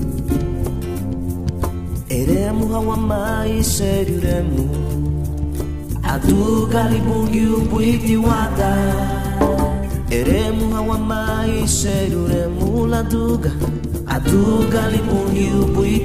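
The stream likely lost a tiny run of dropped samples, about 0.7 ms each time, so the waveform leaps straight to a later value. That discontinuity is heard as a single sharp click at 0.67, 10.72 and 11.89 s, with no sound audibly missing.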